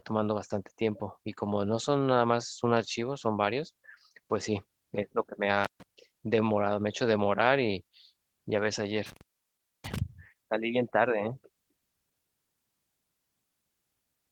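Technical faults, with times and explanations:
5.64–5.83 s and 9.06–9.99 s, intermittent contact: The sound drops out twice, for about 0.14 s and then 0.63 s. A loose cable or plug briefly breaks the signal path. Each gap has crackle at its edges as the contact opens and closes.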